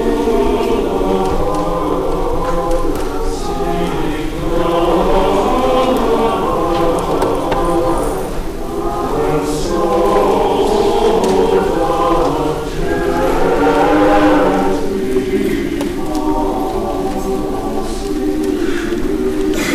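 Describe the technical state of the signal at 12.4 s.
At 12.4 s the signal is hard clipping, as it is across the whole clip. The level is pushed about 9 dB past what the signal chain can pass, so the peaks are sliced off flat, affecting roughly 2 percent of the waveform. Those abrupt flat tops add harmonics far up the spectrum, heard as crackle on the loudest moments. Soft saturation would instead round the peaks and sound warmer, without this brittle edge.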